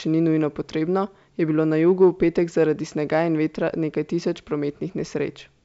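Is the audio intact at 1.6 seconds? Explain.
Yes, the audio is intact at 1.6 seconds: the speech passes cleanly through G.722 wideband telephone coding at 64 kbit/s, with nothing above about 7.7 kHz and no more than faint coding damage.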